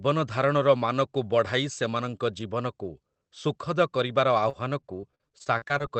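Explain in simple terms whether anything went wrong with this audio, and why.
From 4.49 to 5.83 s, the speech turns choppy and robotic. This is repeated packet loss. Small pieces of sound got lost on the way, about a dozen times. Each hole, up to 44 ms long, was patched by stretching the previous sound.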